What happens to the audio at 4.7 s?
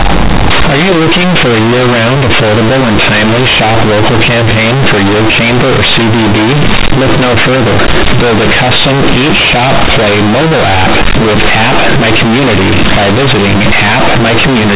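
At 4.7 s the speech is harsh, very loud and buzzy, with strong noise where pauses should be quiet. This is companded audio read as linear, and it lasts the whole clip, not just this moment. The mu-law telephone bytes are being played as plain 8-bit samples with no expansion. Each sign change jumps across about half the output range, so soft parts come out as loud as strong ones and the waveform is badly bent, all within the 4 kHz telephone band.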